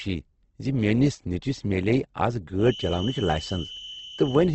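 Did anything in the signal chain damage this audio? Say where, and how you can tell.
Yes. The whole clip sounds like Opus compression in music mode: nothing above 8.2 kHz, and the speech has a grainy, rough texture. That points to a low rate of around 16 kbps at the codec stage.

From 2.55 s to the end there's a feedback whistle, a thin 3 kHz tone that slowly swells and fades, sitting well under the speech. It's likely a speaker-to-mic loop hovering just short of runaway.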